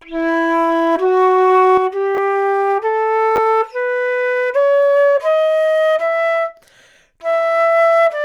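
At 1.78 s the level drops abruptly by about 6 dB and stays down to the end. This is most likely one channel dropping out before a mono sum, halving the shared material and losing anything unique to that channel.

Chunks out of order occur from 2.15 to 2.18 s and again from 3.36 to 3.38 s. In each, a 10 ms block plays late, two blocks behind at the first point and one behind at the second, producing brief jumbled flickers.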